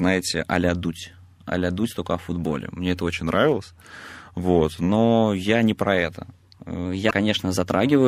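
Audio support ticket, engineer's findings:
Drift correction step, likely clock-sync resampler adjusting playback rate in single jumps. 3.12–4.89 s, ending just before "я не про это": rate down about 6.4%, pitch drops about 114 cents, roughly a semitone. 6.85 s to end, after "я не про это": rate up about 6.4%, pitch rises about 107 cents. Speech audibly detunes, then snaps.

Damaged data in compressed stream, 7.07–7.12 s, inside the second speed-up. Corrupt frame bytes; decoder misparses, loses sync, hunts for next frame header. Heard as a 50 ms glitch breaking the speech.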